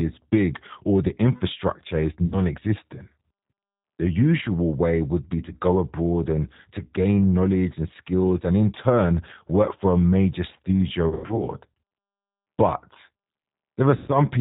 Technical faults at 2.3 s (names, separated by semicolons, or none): G.729 codec; VoIP packet loss concealed by the speech codec